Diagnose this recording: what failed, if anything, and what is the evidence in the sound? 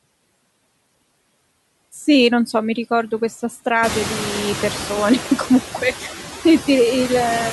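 Call processing is running a noise suppressor through the whole clip, and noise suppressor artifacts are audible. Frame by frame it estimates which bands hold steady noise and pulls them down by about 20 dB, so the background drops away between phrases and comes back underneath the speech whenever the suppressor lets speech bands through. The room noise, a normal part of the recording, rises by about 18 dB around 4 s. It then sits about 11 dB below the speech, which makes this pumping more exposed in the second half.

Hard clipping occurs from 2.10 to 2.57 s, where some stage, most plausibly the converter or a fixed-range sample-format step, is driven about 2 dB past its ceiling. The waveform peaks that exceed that limit are sliced flat, and those squared-off tops generate high-order harmonics. Because the overdrive is slight, only the loudest peaks are cut, so the result is brief crackle on those peaks within that half-second rather than a continuous harsh fuzz.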